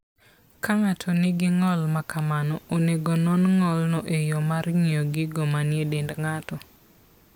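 Speech, and nothing in the signal shows a technical fault at any point.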